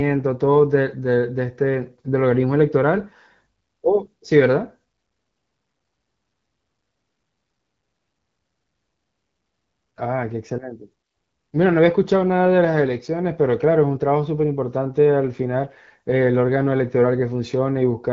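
Nothing goes wrong in this speech recording; it sounds like ordinary AMR wideband (HD Voice) audio, with the top end stopping around 7.5 kHz and the light coding texture you'd expect at a rate of about 12.65 kbit/s.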